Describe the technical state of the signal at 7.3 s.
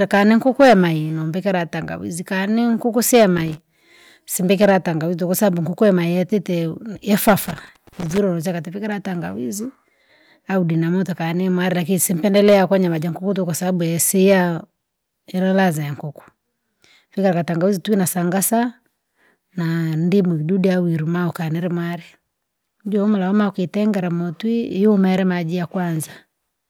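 At 7.3 s the speech is in hard clipping, running from 7.13 to 7.33 s just after "yatite yeo". Driven about 9 dB past the ceiling, the peaks are sliced flat, producing harsh crackle. The waveform shows squared-off tops, and the spectrogram shows harmonics smeared upward.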